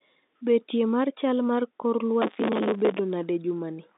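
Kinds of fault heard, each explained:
Processor overload crackle: from 2.22 to 2.99 s, just after "mar chal mar kor", the processing could not keep up, and dozens of deadlines were missed. Each time, a stale fragment of earlier audio was replayed in place of fresh sound, with abrupt edges at both ends. The fragment lengths suggest buffers of around 5 ms. Strung together, these hard-edged repeats form a gritty tearing crackle laid over the telephone-band sound, and it stops once the overload clears.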